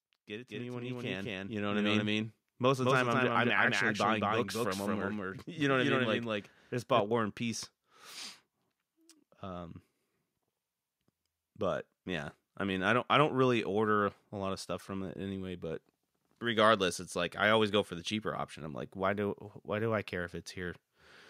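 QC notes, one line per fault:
0.27–2.19 s, automatic gain rising: over roughly two seconds the level climbs by about 10 dB, with the room tone and noise floor lifting in step with the speech. That joint swell is the signature of an automatic gain control reacting to an input it judged too quiet and ramping its gain up gradually rather than in one step, so everything passing through the stage, wanted and unwanted, gets louder together until the control settles.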